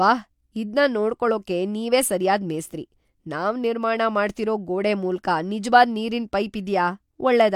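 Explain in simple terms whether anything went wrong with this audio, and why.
Nothing went wrong with this audio, and no fault can be heard anywhere in the recording.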